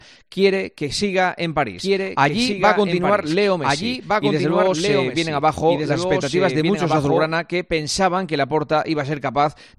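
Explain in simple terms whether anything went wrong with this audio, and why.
From about 1.78 s to 7.32 s there's a doubled audio track: a second, noticeably quieter copy of the sound trails roughly a second and a half behind, starting and stopping abruptly. Likely cause: the audio got captured twice through a slower second path.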